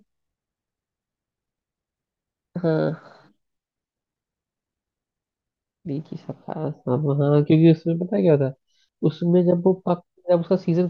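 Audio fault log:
1.96–3.75 s and 7.50–9.21 s, drift correction step: the speech runs about 6.1% fast and roughly a semitone sharp (103 cents), then later about 6.1% slow and 109 cents flat, each snapping back. Speed and pitch move together, likely a clock-sync buffer adjusting playback rate in one step.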